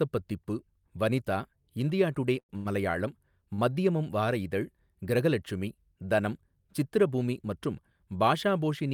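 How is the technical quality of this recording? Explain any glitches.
Speech that is interrupted three times by brief stalls.

Short stalls from late packets occur at 2.39 to 2.51 s and 2.57 to 2.67 s, just after "வனிதா இந்தியா டுடே", and at 3.54 to 3.60 s, just before "மத்யமம் வார இதழ் கிரகலட்சுமி". Each time a packet arrived late and the jitter buffer emptied. The receiver held the last sound for about 95, 80 and 40 ms, then resumed where it had stopped. Nothing is lost, but each sound is stretched with a slight buzz or dip, and the speech falls slightly behind each time.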